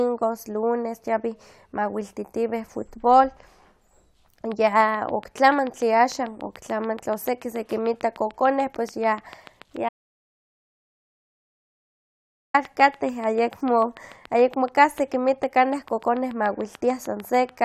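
A train of clicks runs from 4.52 s to 17.50 s: about a hundred evenly spaced pops at 6.86 per second, peaking about 5 dB above the speech, likely from interference by nearby equipment. An audio dropout to silence cuts in at 9.89 s, replacing the speech with dead digital silence for 2.65 s until 12.54 s, likely from a momentarily lost input.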